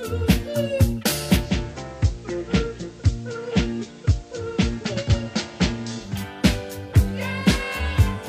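At 1.36 s the sound blends from digital radio to analogue FM over roughly 230 ms: level falls about 3 dB, and hiss appears around 30 dB down, reversing at 6.23 s. Unlike a plain dropout, the sound never stops.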